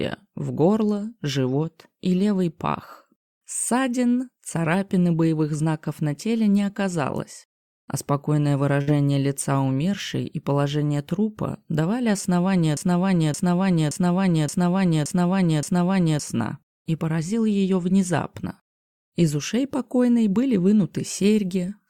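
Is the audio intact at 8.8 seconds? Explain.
No. A burst of packet loss runs from 8.81 to 8.89 s. Several packets went missing, so the receiver stretched the last sound for about 59 ms while fading it down, then resumed with roughly 60 ms of audio skipped.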